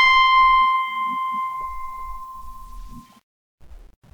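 No technical faults can be heard anywhere in this music.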